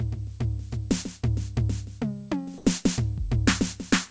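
From 2.58 to 2.66 s, the background under the music briefly turns into a smooth, featureless hiss for about 80 ms, at the same level as before but with its texture gone, sitting roughly 24 dB below the loud passages. This is likely comfort noise in place of the background: the sending side judged the moment silent, stopped transmitting, and the receiver filled the gap with synthetic noise. The call codec, consistent with G.722 at 64 kbps, leaves nothing above 8 kHz.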